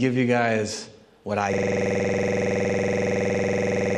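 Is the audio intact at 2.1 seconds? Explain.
No. From 1.53 s to the end, a system hang loop repeats one 46.4 ms buffer at 21.5 Hz, a buzzing stutter that fits a frozen 2048-sample ring buffer.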